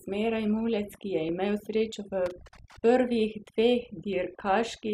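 Overdone noise removal runs through the whole speech clip. The suppression was set too hard. Frequency bands near the noise level are pushed almost to nothing. The background falls to near silence with twinkling specks. Quieter parts of the voice vanish too.

At 1.29 s there is a small jump forward in the sound. Nothing goes silent. The likely cause is a dropped buffer (overrun). Samples were overwritten before being read. The two sides join directly, losing roughly a fiftieth of a second.

From 2.26 to 2.79 s an irregular burst of crackle and scratching cuts in. This is loose connector crackle. A worn or dirty contact keeps making and breaking. The signal is chopped into fragments.

At 4.13 s the same skip returns, again likely from a dropped buffer. This gap is shorter, roughly a hundredth of a second.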